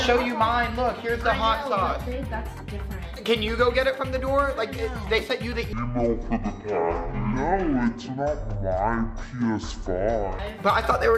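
From 5.73 s to 10.39 s, the system treats an interleaved stereo stream as a single channel, a fault known as stereo read as mono: left and right samples are played back to back as if they were successive moments of one signal. Each stereo frame therefore takes two sample periods, so the sound runs at half speed and drops a full octave, 12 semitones down. A fainter mirrored copy of the sound also appears in the upper half of the spectrum.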